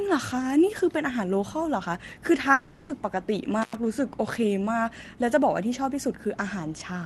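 At 2.53 s the speech gives way to a smeared, buzzy continuation of the last sound that fades over about 0.36 s, running right up to 2.91 s with no true silence. That's most likely a long network dropout, with the receiver papering over the missing stretch.

Then from 3.62 to 3.75 s you get an intermittent contact. Something in the line opens for roughly 100 ms, so the sound drops out with crackle at both edges and only faint hiss in between, all riding on Opus-coded audio that tops out around 12 kHz.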